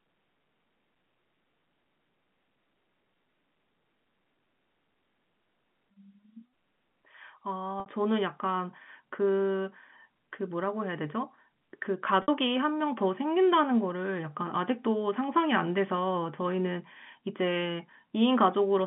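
At 7.8 s and again at 12.22 s, the speech briefly stalls on a held, buzzy tone for about 60 ms before returning. Both are packet loss with pitch repetition: a run of audio, likely three 20 ms packets, never arrived, and the receiver filled the hole by looping the last pitch period and fading it down. The telephone-band sound of the G.711 line carries on around both gaps.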